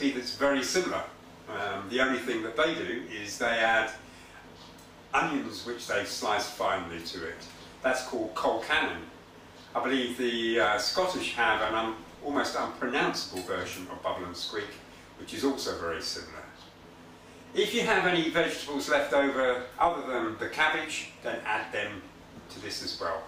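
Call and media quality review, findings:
No audible defects found in the capture; no dropouts, distortion or timing anomalies to report.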